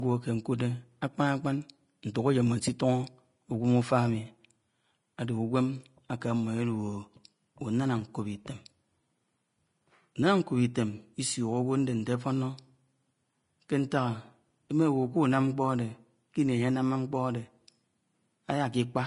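Throughout, the speech is hissy and grainy, likely from Vorbis compression near 31 kbps. A spectrogram shows speckled, noisy treble ending abruptly at 10.5 kHz.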